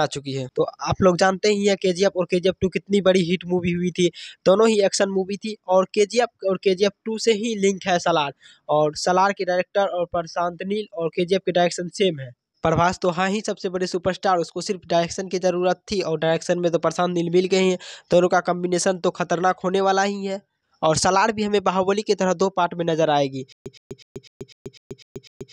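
From 23.52 s to the end, a stutter with silent gaps: an identical 117 ms burst repeats eight times every 250 ms. On the waveform it shows as matching blocks separated by 133 ms of flat digital silence. The cause is likely a stalled stream replaying its last fragment.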